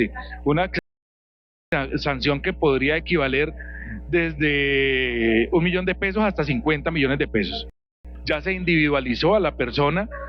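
A steady low 60 Hz tone runs under the whole clip at about 15 dB below the sound, which is mains hum from a ground loop or nearby transformer coupling the power line in. The sound drops to silence from 0.79 to 1.72 s and from 7.70 to 8.05 s, then picks up exactly where it left off. These are rebuffering stalls, where the player ran dry and waited for more data, adding about 0.93 s and 0.35 s.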